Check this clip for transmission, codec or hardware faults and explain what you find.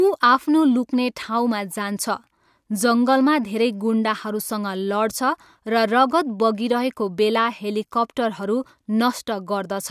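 No faults can be heard anywhere in the speech. There is nothing to locate or explain, since no event stands out at any point.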